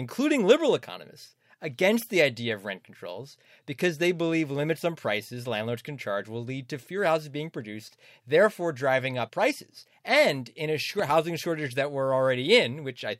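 A speech recording with a loud pop fault: a brief voltage step, likely from a plug, switch, static discharge or driver glitch, entered the signal chain between 10.99 and 11.12 s, producing two sharp pops in quick succession that peak several decibels above the speech while it continues underneath.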